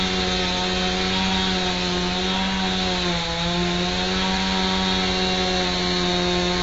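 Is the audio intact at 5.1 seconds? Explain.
No, at 5.1 seconds the sound is dull and smeared, with nothing above 7.6 kHz. This is likely AAC compression at a low bitrate, which fits about 24 kbps, and it runs through the whole clip. Plain filtering would only remove the top end; this also leaves a warbling, fizzy texture.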